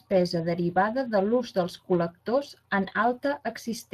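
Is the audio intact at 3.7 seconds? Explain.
No. At 3.7 seconds the speech carries Speex codec damage, present throughout. The CELP coder at a setting that sounds like about 22 kbps gives the excitation too few bits, so the voice is plainly hoarse and noisy. A spectrogram shows blurred harmonics, a smooth noise-like fill in the upper band instead of fine detail, and nothing above 15.2 kHz.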